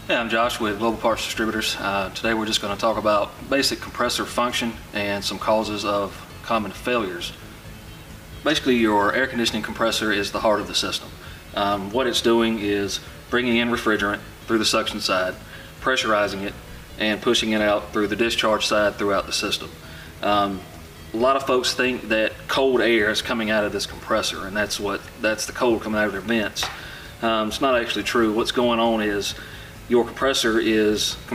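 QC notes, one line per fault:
Nothing stood out on listening.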